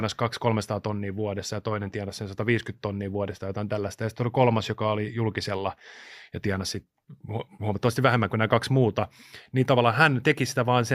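Nothing in the speech stood out as a technical problem on listening.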